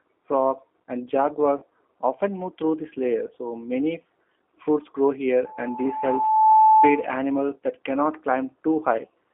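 G.729 codec damage runs throughout: the speech is squeezed into roughly 250 Hz to 3.4 kHz and sounds rough and synthetic, which fits an 8 kbit/s G.729A stream.

VoIP packet loss concealed by the speech codec occurs from 1.58 to 1.64 s. About 40 ms of audio is missing, likely two packets, and the decoder smears the last sound into a fading buzz or coloured noise.

A loudspeaker feedback squeal runs from 5.44 to 7.12 s. An 868 Hz tone swells over about a second until it sits a few dB above the speech, as the microphone re-amplifies the loudspeaker.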